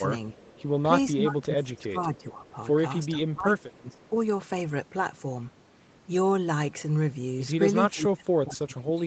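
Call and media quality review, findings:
Speech suppressed in double talk at 1.15–2.55 s, 3.15–4.15 s and 7.91 s to end: level dips about 20 dB (about 25 dB in last span), likely AEC gain reduction while both sides talk.

Echo leak at 2.46–2.50 s and 3.93–4.08 s: faint delayed copy at 432 ms, about 35 dB below speech, likely loudspeaker residue passing the far-end echo canceller. Band-limited to 8 kHz, consistent with the Opus path.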